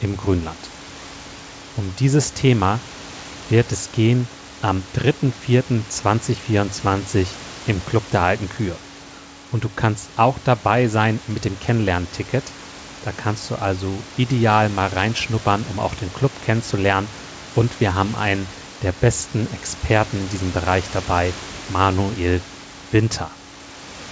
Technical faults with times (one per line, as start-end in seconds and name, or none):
none